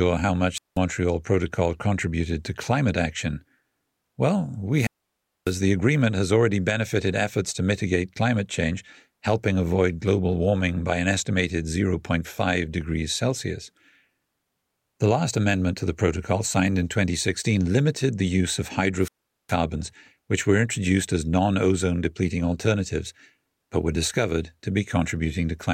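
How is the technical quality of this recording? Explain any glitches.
The recording has three wireless microphone squelch dropouts, at 0.55–0.78 s, 4.73–5.59 s and 19.00–19.55 s (after "limited the use of"). Each time, the FM radio link faded until the receiver's squelch cut its output. The sound is a rise of hiss or static followed by near silence lasting about 190 ms, 600 ms and 410 ms respectively.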